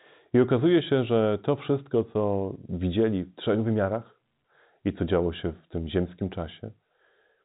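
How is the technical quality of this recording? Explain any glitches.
No faults or glitches heard.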